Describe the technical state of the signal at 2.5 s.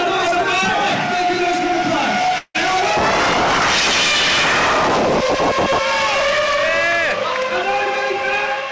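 At 2.5 s the signal is inside a gap from 2.38 to 2.56 s, likely a long network dropout. The last sound continues as a fading buzz, then about 50 ms of silence, and 160 ms of audio is lost. The waveform shows a decaying repetitive pattern flattening out; the spectrogram shows smeared bands fading to an empty column, all below the call path's 8 kHz limit.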